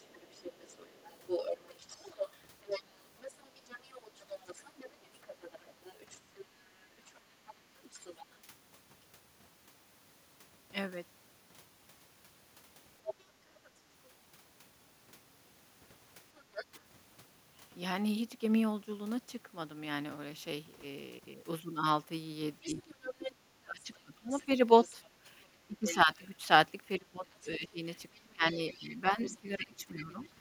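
A second, fainter voice sits under the speech from 0.07 to 8.24 s, roughly 15 dB down, and returns at about 10 dB down from 13.05 to 13.7 s, 16.37 to 16.65 s, 22.6 to 23.32 s and 24.31 to 26.25 s, then more faintly, around 20 dB down, from 27.31 to 30.29 s. This is the other side's voice leaking through, likely far-end sound from the talker's loudspeaker that the echo canceller failed to remove from the microphone signal.

Where the far side plays while the talker speaks, the main voice itself sags. A brief dip of around 10 dB lasts about 70 ms at 16.71 to 16.78 s. From 22.64 to 30.26 s the voice drops away, by up to roughly 25 dB, adding up to about four seconds of lost level. This is speech suppressed in double talk, likely the echo canceller mistaking both voices for echo while the two sides talked at once and turning everything down.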